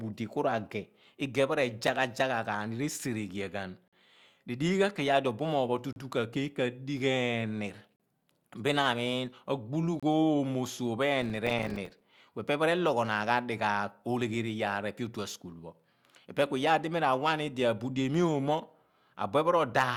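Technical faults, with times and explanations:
1.87, 3.88–3.93, 5.93–5.96, 7.96–8.00 and 10.00–10.03 s, gap between stream segments: hard-edged holes of silence, from about 5 ms up to 48 ms, recur every 2 s, the last just after "amiin agbulu". Timestamps of consecutive 2-second segments leave small gaps, which the player fills with silence.
11.22–12.04 s, processor overload crackle: a gritty burst of crackle rides on the speech for under a second, then stops. Dozens of audio buffers, each a few milliseconds long, miss their deadlines over this stretch, and each miss drops in a tiny hard-edged silence.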